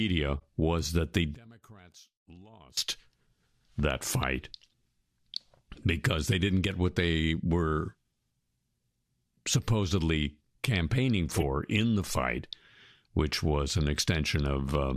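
Decoded corrupt frames cause three brief faults in the audio. From 0.38 to 0.42 s, about two damaged frames put energy at the wrong frequencies, giving a short chirp-like blip. A single frame at 1.45 to 1.48 s gives a much fainter one. The worst is at 11.32 to 11.43 s, where roughly five frames produce a burst of noise. On a spectrogram each shows up as a sharp-edged block or smear of energy in the wrong bands, and in the waveform as a brief disturbance. From 1.35 to 2.77 s the level falls by about 25 dB and what remains is a faint copy of the sound. The likely cause is one stereo channel with inverted polarity summed to mono, so that material common to both channels cancels. The waveform shows a sudden narrow stretch, and the spectrogram shows the content thinning sharply for that span.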